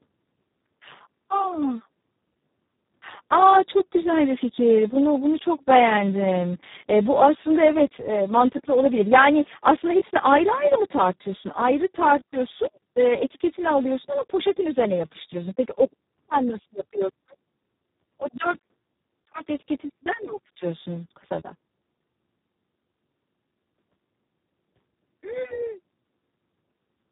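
From start to end the speech carries heavy Speex codec damage: a hoarse, noisy, partly robotic quality, which fits a very low bitrate near 4 kbps that leaves too few bits for the excitation. Nothing is heard above 3.8 kHz, so the sound is band-limited and dull.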